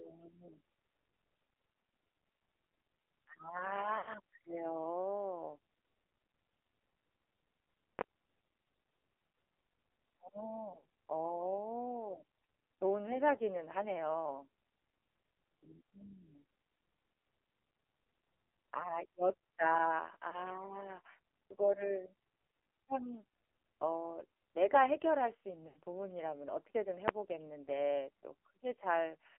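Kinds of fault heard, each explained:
AMR narrowband mobile codec: Throughout, the speech passes through the AMR-NB mobile codec at 5.9 kbps, band-limited to 300 Hz to 3.4 kHz. At that low rate, the vocal-tract model's sparse pulse excitation makes the voice heavily buzzy, synthetic and muffled.
Lost AMR speech frames: At 3.98 to 4.11 s, 10.78 to 10.84 s, 20.30 to 20.38 s and 25.68 to 25.79 s, the decoder is missing 80, 60, 20 and 80 ms of audio. It repeats its last good pitch and spectral settings at falling gain, producing a stretched, fading warble.
Invalid numbers at full scale: At 7.99 to 8.01 s and at 27.08 s, a calculation yielded invalid values that were pinned to full scale. The 20 ms and 10 ms blocks are so short that each is heard as a single, very loud bang.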